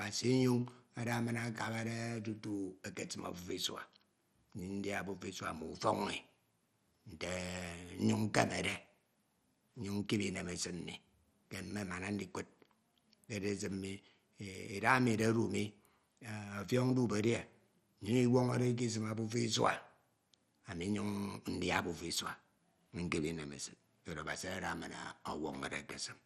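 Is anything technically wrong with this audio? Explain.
Yes. Throughout the speech there is MP2 compression damage, likely from low-rate MPEG Layer II encoding at about 64 kbps. Starved of bits, the encoder drops upper sub-bands, leaving nothing above about 13.6 kHz, and coarsely quantises the rest, so the sound is dull with a plainly audible gurgling, granular texture.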